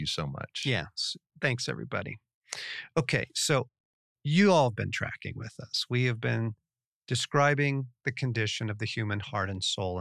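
No technical faults can be heard anywhere in the speech, so there is nothing to place in time order.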